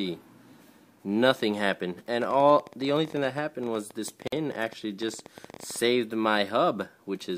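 From 2.22 s to 5.77 s a train of clicks ticks over the sound at an uneven pace of about 13 per second, some fifty in all, peaking near the level of the audio itself. On a spectrogram they are thin vertical lines; likely interference or a faulty connection or power supply.

At 4.27 s a gap at a join of encoded pieces opens for 50 ms, where separately encoded segments kept their start delay and end padding. The waveform drops to flat silence with smeared edges, then the sound resumes where it stopped.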